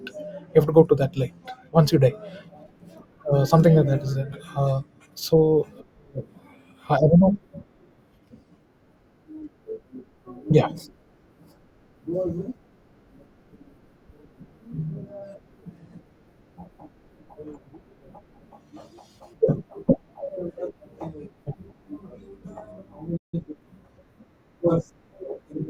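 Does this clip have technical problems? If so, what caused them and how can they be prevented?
Yes. A playback stall cuts the speech to silence from 23.17 to 23.34 s, about 0.16 s. The player likely ran out of buffered data or was blocked. A larger playback buffer would prevent it.

Time-compressed catch-up follows from 23.34 to 23.64 s. The player trims its backlog, so speech rushes at 1.5 times speed, pitch unchanged. Preventing the stall removes the need for it.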